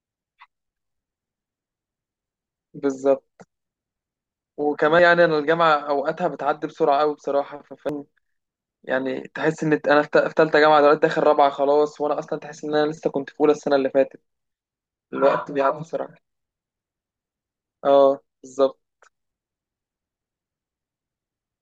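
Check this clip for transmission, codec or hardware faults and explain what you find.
Two quick dropouts in the speech, both compressed frames skipped. At 4.99 s roughly one frame goes missing, and at 7.89 s about two. Each skips around 100 to 150 ms, which fits frames of about 85 ms. The missing frames are not played, so the speech jumps ahead at each join.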